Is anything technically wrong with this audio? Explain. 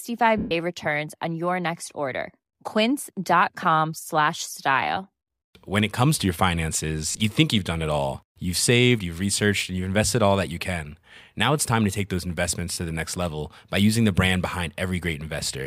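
Yes. There are lost LE Audio frames, three times. From 0.38 to 0.51 s, 130 ms is lost just before "returns on your next". From 7.12 to 7.20 s, 50 ms drops out in short bursts, the longest about 30 ms, before "you think you've done". From 12.73 to 12.77 s, 40 ms goes after "to take those investments". The decoder fills each gap by reusing the last spectrum with random signs. The sound becomes a brief noisy smear. The longer first gap fades as the fill dies away.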